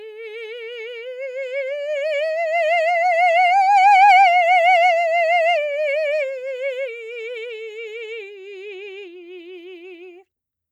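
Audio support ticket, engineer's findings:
Engineer's findings: no fault found in this music clip.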